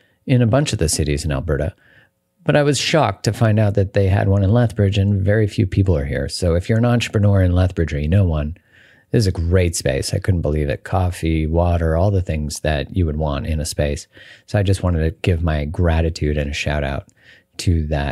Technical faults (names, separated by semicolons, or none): none